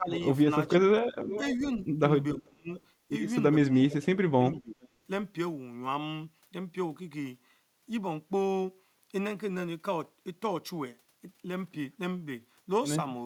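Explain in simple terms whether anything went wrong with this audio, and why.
Two things go wrong here, and they show up together in two stretches.

First, there's echo leak. From 0.13 to 2.8 s, and again from 3.9 to 4.88 s, you can hear a delayed copy of the speech trailing the original by about 0.44 s. In the first stretch it's fairly noticeable; in the second it's much fainter. The likely cause is the far end playing the call on a loudspeaker, with its echo canceller not removing everything its microphone picked up, so some of it was sent back.

Second, there's speech suppressed in double talk. Between 0.0 and 2.7 s, the speech dips sharply in places, adding up to roughly 0.7 s of damaged sound. Between 3.96 and 4.78 s, about half a second is affected the same way. These drops line up with the echo, which points to the likely cause: with both sides sounding at once, the echo canceller couldn't separate the real talker from the loudspeaker echo, so it turned everything down.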